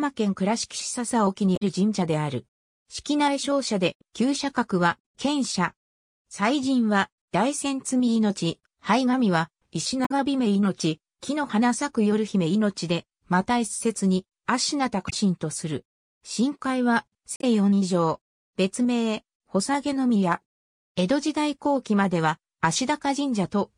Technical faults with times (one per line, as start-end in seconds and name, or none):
1.53-1.63 damaged data in a compressed stream
10.02-10.12 damaged data in a compressed stream
15.06-15.13 damaged data in a compressed stream
17.36-17.44 damaged data in a compressed stream